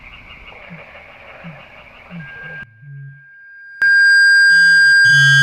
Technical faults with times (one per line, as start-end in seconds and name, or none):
2.19-5.42 loudspeaker feedback squeal
2.63-3.82 one channel inverted